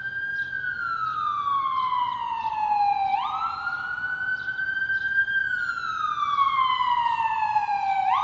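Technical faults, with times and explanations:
No technical faults can be heard anywhere in this audio.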